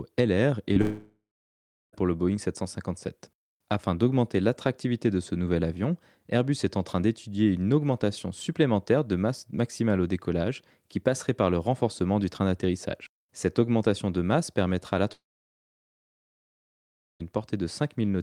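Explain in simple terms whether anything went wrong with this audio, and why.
Right at the start, around 0.73 to 0.77 s, there's a tiny glitch: a short concealed packet loss. About 20 ms of the speech never showed up in time, so the receiver papered over the gap by stretching the sound that came just before and then easing back into the real audio. You'd hear it as a quick smear or wobble, and a short consonant could go missing.

Straight after that, from about 0.81 to 1.95 s, the sound cuts out for real, and the same thing happens again from about 15.13 to 17.22 s. Both are most likely a long network dropout, with roughly 1.1 s and then 2.1 s of audio never arriving. The receiver keeps the last sound going as a fading buzz or hiss, then there's nothing: about 0.7 s of silence in the first gap and nearly 2 s in the second. When the speech comes back, the missing part is simply gone.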